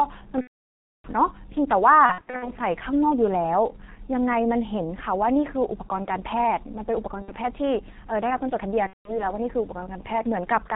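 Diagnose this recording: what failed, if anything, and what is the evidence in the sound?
The whole recording has passed through the G.723.1 codec at 6.3 kbit/s, and the coding damage is heavy. Nothing above 4 kHz survives, so the speech is muffled, with a hoarse, rough texture and smeared consonants. The cause is the codec's low bitrate and its 30 ms frames: the spectral model of the voice is refreshed too slowly to follow fast articulation, and transients are averaged away within each frame.

The network stage also fails. VoIP packet loss, concealed by the speech codec, appears at four points. From 0.41 to 1.08 s the longest gap, roughly 630 ms of missing audio, which fits about 21 lost frames, becomes a stretched sound that fades and is then muted. From 2.06 to 2.51 s scattered losses, the longest run 60 ms, leave the speech stretched and weakened in places. Shorter gaps at 7.22–7.32 s and 8.87–9.24 s leave the speech briefly weak or distorted as the decoder recovers.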